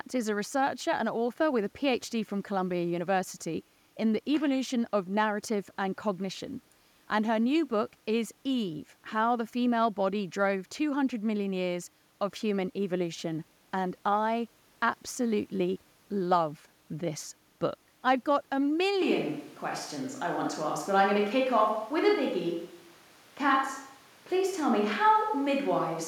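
A switch to a distant microphone occurs at 19.02 s in this speech recording and lasts to the end: the voice abruptly turns roomy and hollow with thinner bass, at roughly the same level, while background noise rises to about 30 dB below the speech, likely because the close microphone dropped out and a farther one took over.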